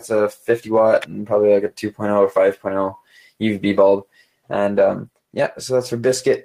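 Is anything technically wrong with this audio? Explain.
Yes. A noise suppressor applied to music or sounds is active across the whole clip. Designed for speech, it treats sustained tones and ambience as noise and keeps pulling its gain up and down, so the level wanders by roughly 5 dB. Attacks get through, but held material and decays thin out and flutter. A waveform shows an uneven, breathing envelope. A spectrogram shows sustained bands and tails fading sooner than they should, with the quiet background smeared and patchy.

There are three spots of sound cut by the noise suppressor: 0.34 to 0.49 s (down about 11 dB), 3.0 to 3.41 s (about 16 dB) and 4.03 to 4.5 s (about 17 dB). In each, the suppressor judged the material to be noise and clamped it harder than its surroundings, so the sound sinks or its tail is chopped short. The waveform shows a visible notch in the envelope. The spectrogram shows a darkened vertical patch where energy drops across the band and then returns.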